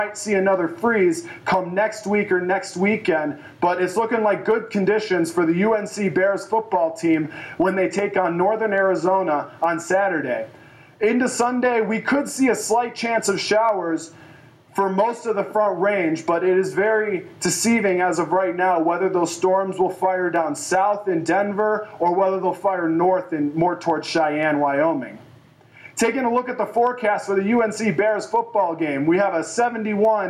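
Gain pumping runs through the whole clip. The gain swings by something like 15 dB, so everything feels squashed. It's likely the input gain was set far too hot, with a fast limiter clamping down on every peak.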